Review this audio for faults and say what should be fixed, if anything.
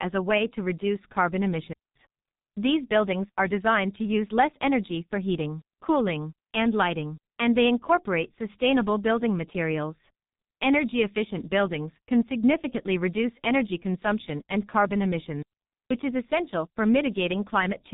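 Throughout, the speech sounds muffled and hoarse, with smeared consonants and no content above 3.8 kHz. That points to the G.723.1 codec at a bitrate around 6 kbit/s, where heavy coding from 30 ms frames and a slowly updated voice model damages detail. Preventing it means carrying the call on a wideband codec at a higher bitrate.

Two clean holes of near silence appear, with no noise burst around either: at 1.73 to 1.96 s, about 0.23 s, right after "way to reduce carbon", and at 15.42 to 15.91 s, about 0.48 s, between "energy consumption and carbon" and "is essential for". These are digital wireless dropouts, where the receiver lost too much data and muted with a quick fade. Preventing them means keeping the transmitter in clear line of sight and close to the receiver, away from interference.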